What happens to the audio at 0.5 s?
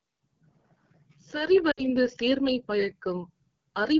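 AMR wideband (HD Voice) codec damage is present at 0.5 s, as it is across the whole clip. The codec rebuilds speech from a pulse-excited vocal tract model up to 6.4 kHz and fills 6.4 to 7 kHz with shaped noise. Here the speech sounds plainly rough and raspy, which fits one of the two lowest rates, around 8.85 kbit/s.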